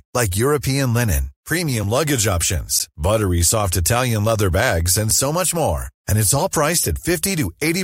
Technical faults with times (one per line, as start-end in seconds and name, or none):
2.79 block of digital silence